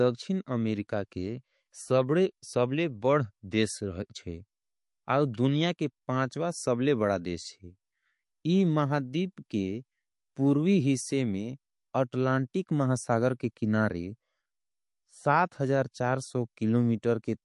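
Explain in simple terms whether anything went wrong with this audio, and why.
MP3 compression, throughout the whole clip: the speech sounds dull and plainly watery, with nothing above 11.3 kHz. This is likely from heavy MP3 squeezing, which cuts off the treble to save space and discards quiet detail that flickers in and out, adding metallic chirps on s sounds.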